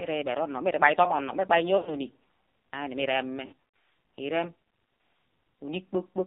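Speech heard through an AMR narrowband mobile codec: energy sits in a band from 200 Hz to 3.7 kHz with nothing above, and the heavy damage and buzzy, synthetic texture fit a low mode near 5.9 kbps. A spectrogram shows a hard ceiling and smeared, blocky harmonics. Lost AMR speech frames appear between 1.78 and 1.96 s, where about 80 ms of sound is missing, and between 3.46 and 3.53 s, where scattered losses include a 60 ms run. The decoder repeats the last settings at falling gain, so the sound stretches and fades. On the waveform these gaps show as shrinking envelopes followed by a weak recovery.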